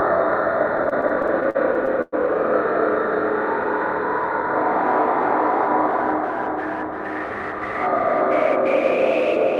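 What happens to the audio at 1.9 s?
That's inside repeated stalls (stutter) from 0.77 to 2.14 s: late packets kept draining the jitter buffer, so the last sound gets stretched 14 times, dragging and stuttering.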